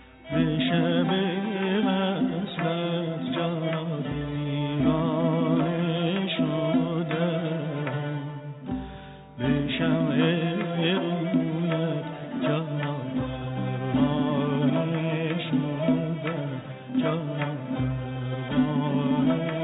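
Nothing stood out on listening, beyond the narrow telephone-style band of a call path that carries nothing above 4 kHz.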